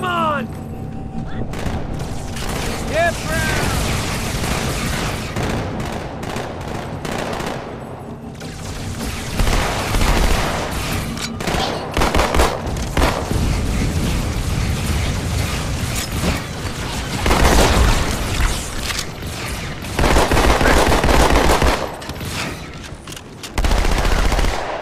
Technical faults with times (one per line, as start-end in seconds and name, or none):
none